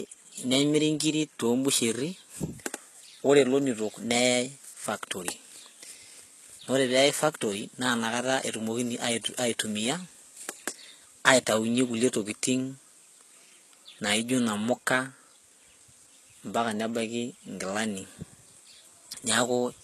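The whole clip carries HE-AAC compression damage, and it is plainly audible. The treble is not the original. It is likely rebuilt by spectral band replication, with lower bands copied upward under a coarse envelope. The copied harmonics do not line up with the real ones. S sounds turn gritty and metallic. The degree of damage fits a very low bitrate, around 16 kbps.

At 8.61 s, just before "ait aitumia", there is a single sharp click. This is dropped samples, likely a single sample or so missing from the stream. The waveform jumps straight from one value to a later one. Far too little is lost to remove any sound. The jump shows only as a thin vertical line across the spectrum.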